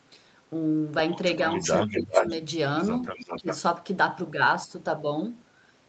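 From 1.5 to 2.33 s a second copy of the speech trails the original by 383 ms, nearly as loud as the direct voice, so the two overlap in a confusing doubling. This is an echo leak: likely the far end's loudspeaker sound reached its microphone, and the echo canceller failed to strip it before sending it back. Within that stretch, from 1.86 to 2.25 s, the main voice sinks by roughly 15 dB for about a third of a second. That is speech suppressed in double talk, likely because the canceller could not tell the local talker from the returning echo and attenuated both together. The delayed copy returns from 2.98 to 3.58 s, again 383 ms behind but around 10 dB quieter, a fainter ghost under the voice. During it, from 3.4 to 3.47 s, the voice briefly ducks by roughly 15 dB.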